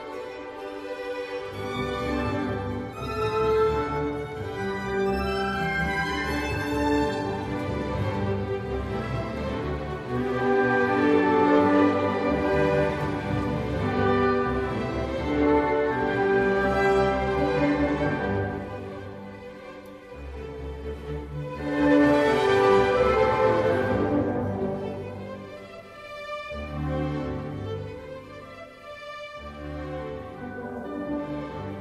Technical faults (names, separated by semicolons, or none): none